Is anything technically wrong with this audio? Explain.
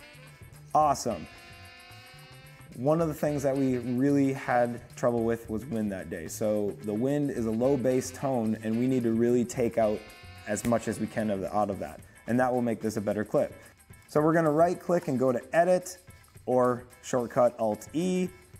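No, no technical faults detected.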